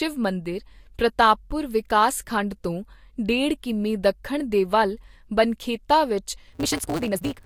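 It's a short speech clip, and the trouble hits right at the tail: from 6.52 s, just after "ਦੇ ਵੱਲ ਬਨਖੇਤਾ ਵਿੱਚ", to the end at about 7.46 s, there's a block size mismatch (truncated). One stage hands over longer blocks than the next one takes, and the leftover end of each block gets dropped. You hear a buzz at 172 Hz and the speech rushes along at 1.88 times normal speed while the pitch stays about where it should. That buzz rate fits 256-sample reads at 44.1 kHz.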